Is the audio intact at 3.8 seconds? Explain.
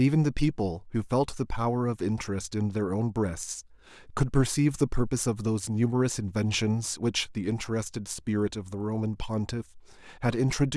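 Yes, the audio is intact at 3.8 seconds, with no audible fault at that moment.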